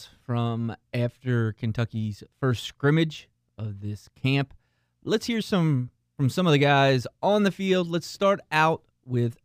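Right from the start and through the whole clip there's imaging from linear upsampling: the speech was raised in rate by straight-line interpolation, which fits a jump from 22 kHz to 44.1 kHz. The top end sounds dulled, and a mirrored copy, roughly 35 dB down, sits between 11.025 and 22.05 kHz, giving sibilants a light metallic shimmer.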